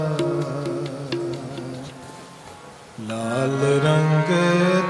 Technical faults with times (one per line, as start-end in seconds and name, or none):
none